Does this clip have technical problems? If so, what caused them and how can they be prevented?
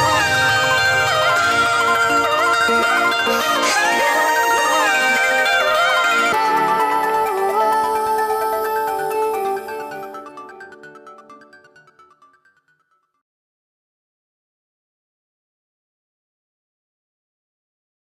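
Yes. A section at the wrong speed runs from 0.0 to 6.32 s. It plays 1.58 times fast, about seven semitones high, likely from a sample-clock mismatch. Match playback and recording clock rates to prevent it.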